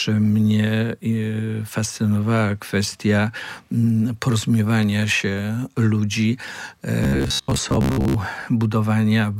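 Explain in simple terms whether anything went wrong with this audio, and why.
Robotic sound from repeated short buffers, 7.04 to 8.20 s: the audio turns into a stiff, metallic buzz at about 67 Hz. New sound likely arrived too slowly, so roughly half the time the player repeated tiny 15 ms slices instead.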